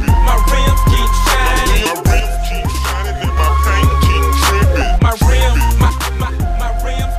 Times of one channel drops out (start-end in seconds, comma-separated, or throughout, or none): 2.20-3.37, 5.90-7.19